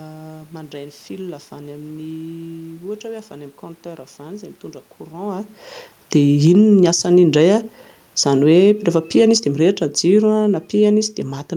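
At 6.2 s the automatic gain starts falling. The control judged the input too loud and eased its gain down by about 4 dB until 7.43 s, so the speech and the room noise sink together. This comes shortly after the talker moved, around 5 s. From 6.7 s to 7.79 s the automatic gain is also rising. The control judged the level too low and raised it by about 5 dB, so speech and background swell together. At 8.13 s the automatic gain falls again, and both sink steadily until the clip ends at 11.56 s.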